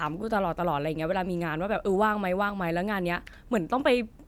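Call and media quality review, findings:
No findings in this call and media quality review; the speech shows no faults to report.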